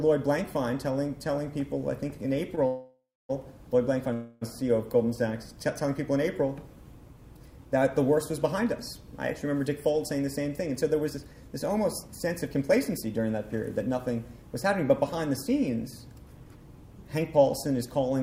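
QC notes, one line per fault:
2.55–2.59 s, short stall from a late packet: one packet arrived late and the jitter buffer ran dry, so the receiver held the preceding sound for about 18 ms and then resumed from the same point. Nothing is lost, but that moment is drawn out slightly, with a faint buzz. On a spectrogram the harmonics run flat and unchanged for that short stretch. In the waveform a few nearly identical cycles repeat before normal variation returns.
2.67–3.31 s and 4.13–4.43 s, call audio freeze: the audio stops advancing twice. In each gap the last sound carries on as a fading buzz; the gaps last 620 ms and then 282 ms. The first gap ends in about 250 ms of silence before playback picks up again. Both gaps are likely the result of packets being held up in transit, so they insert time without removing any material. On a spectrogram each gap shows smeared, flattened bands that fade out, and the first one ends in a blank column. 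In the waveform a decaying repetitive pattern runs into flat silence.
10.56–13.19 s, jitter buffer speed-up: the receiver was holding more audio than it aims for. To bring the delay back down it repeatedly cut out pieces one or a few pitch periods long, about 300 ms in total. Over this span the sound plays at about 109% speed with the pitch unchanged, so it comes across as hurried. On a spectrogram the events are compressed in time while the harmonic spacing stays the same. In the waveform the periodic cycles join together at tiny seams.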